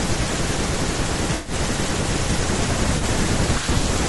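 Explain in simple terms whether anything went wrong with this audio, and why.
Yes, two things went wrong. The whole recording has a rough, grainy edge. The voice sounds plainly fizzy, and the top end sounds thin and artificial. That points to low-delay AAC compression, the kind used in video calls, as the likely cause. This codec works in very short chunks of sound. Short chunks capture the voice's pitch poorly. When the codec also has too little data to work with, the gaps get filled with noise.

There is also AAC frame loss with concealment, in two places. Between 1.35 and 1.53 s, about 100 ms of audio went missing, which suggests several lost frames. The decoder patched the hole by repeating and blurring the last good sound, so it comes out smeared and noisy. A shorter patch, about 40 ms long, sits between 2.97 and 3.03 s. It sounds like a brief phasey blur.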